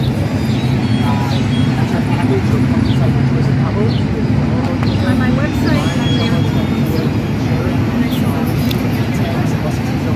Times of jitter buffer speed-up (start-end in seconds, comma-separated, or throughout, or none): none